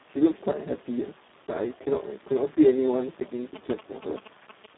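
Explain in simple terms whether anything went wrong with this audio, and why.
Speex codec, throughout the clip: the speech went through this older internet-call codec at a very low quality setting. With too few bits to rebuild the voice properly, it sounds hoarse, noisy and somewhat robotic, and nothing survives above about 3.9 kHz.

GSM signalling bursts, from 3.55 to 4.66 s: a nearby 2G mobile phone was exchanging short radio bursts with the network. The audio circuitry picked these up and turned them into a galloping dit-dit-dit of short 217 Hz buzzes, only somewhat quieter than the speech.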